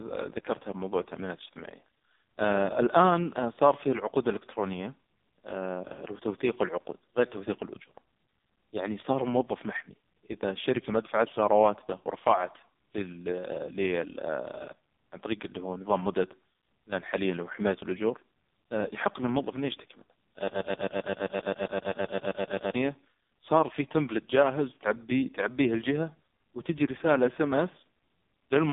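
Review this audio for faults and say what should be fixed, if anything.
The speech sounds thin, buzzy and synthetic throughout, with heavy codec damage and no content above about 3.8 kHz, inside a line band of roughly 250 Hz to 3.7 kHz. This is the AMR narrowband mobile codec. It samples at 8 kHz and rebuilds the voice from a vocal-tract model fed with a few pulses per subframe. The harshness points to its lowest mode, around 4.75 kbps. To prevent it, capture or route the call over a wideband or higher-bitrate path rather than AMR-NB at its minimum rate.

From 20.48 to 22.75 s, a fragment of about 0.13 s repeats back to back, 17 times in a row, like a stuck broken-record loop. The audio that should have filled those two seconds is gone. This likely comes from a stalled player, encoder or stream that kept resending the last fragment it had buffered. To prevent it, add underrun detection so a stalled stream outputs silence or reconnects instead of replaying stale data.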